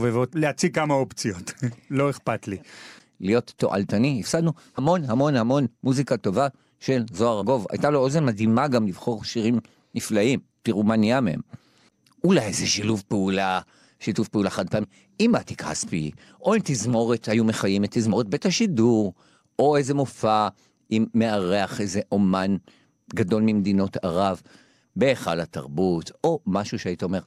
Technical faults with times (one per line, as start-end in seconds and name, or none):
4.77 compressed frames skipped
7.41 compressed frames skipped
14.83 compressed frames skipped